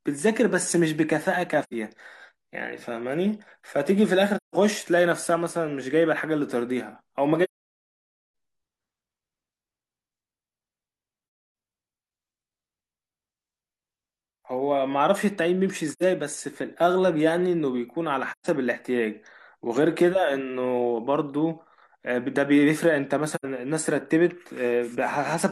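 Soft-edged silent gaps break the speech at 1.63–1.73, 4.37–4.55, 7.44–8.29 (nearly a second), 11.24–11.54, 15.91–16.03, 18.32–18.47 and 23.35–23.45 s. These are AAC frame loss with muting: the decoder zeroed the missing frames, and overlapping windows fade the sound out and back in.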